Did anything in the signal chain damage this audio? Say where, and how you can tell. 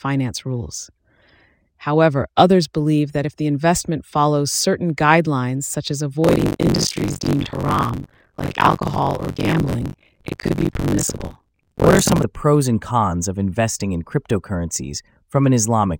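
Yes, buffer tearing at the driver/buffer stage, 6.23 to 12.23 s, after "certain guidelines such as" until "the pros and cons". Roughly half of each period replays audio from about 40 ms earlier, giving a 46.9 Hz rattle that fits a 1024-sample buffer. The waveform shows hard splices every 21 ms; the spectrogram shows evenly spaced vertical streaks.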